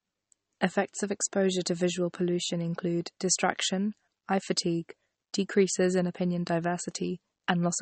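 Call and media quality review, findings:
MP3 compression, whole clip: watery, swirly speech, chirpy s sounds, smeared attacks, nothing above 8.4 kHz. Likely a bit-starved MP3 encode, around 34 kbps by the sound. Encoder chops the treble and flickers weak bands on and off.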